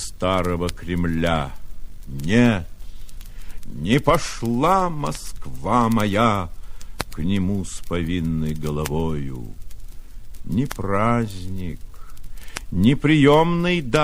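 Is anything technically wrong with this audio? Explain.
No, nothing technically wrong turns up here; the audio sounds fine all the way through.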